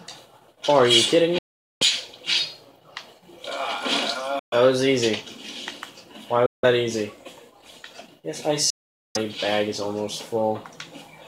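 The sound cuts to silence at 1.38–1.83, 4.39–4.54, 6.46–6.65 and 8.70–9.17 s. Each gap begins and ends within a few milliseconds, and playback resumes further along. This is likely a Bluetooth dropout.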